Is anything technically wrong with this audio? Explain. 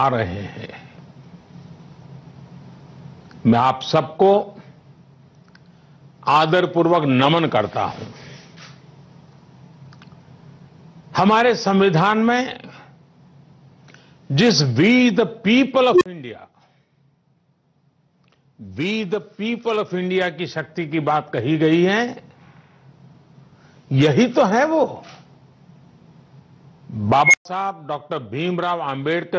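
Yes, gain pumping runs through the whole clip: the gain swings by something like 15 dB, leaving the audio squashed and flat in dynamics. The likely cause is a microphone gain set far too high, with a fast limiter or compressor clamping down on each peak. The call microphone processing, with nothing above 8 kHz, is a separate, normal stage.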